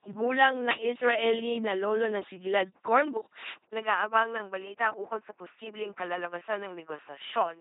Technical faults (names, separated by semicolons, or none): LPC-10 vocoder; input switched to a poorer device